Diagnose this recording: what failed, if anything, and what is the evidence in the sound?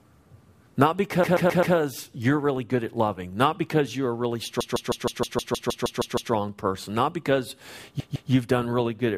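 Repeated frames, at the codec or storage stage. The speech stutters from 1.23 to 1.75 s, 4.6 to 6.32 s and 8.0 to 8.31 s, replaying blocks of 130.6 and 156.7 ms, which fits runs of five or six compressed frames decoded again and again.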